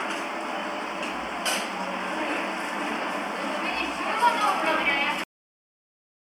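A recording of sounds with a cut-off end: at 5.24 s the audio stops abruptly in mid-sound and drops straight to digital silence for the remaining 1.1 s, with no decay or tail. The final buffers were never written or played out. On a waveform the signal ends in a sharp vertical edge followed by a flat line; on a spectrogram the energy ends on a clean vertical boundary, with blank space afterwards.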